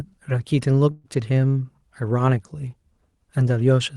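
A call audio freeze interrupts this speech clip from 0.91 to 1.06 s. The last sound before the break is stretched into a fading buzz or hiss for about 0.13 s instead of dropping to silence. The speech then resumes exactly where it stopped, so nothing is lost, but everything after the break arrives about 0.13 s later. The likely cause is delayed packets leaving the jitter buffer empty, with the receiver filling the wait by continuing the last sound. The audio's top end stops around 12 kHz, which fits an Opus call codec.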